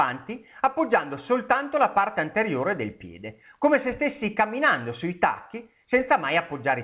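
There are no technical faults to describe in time order, only the narrow band of a phone-style call path with nothing above 4 kHz.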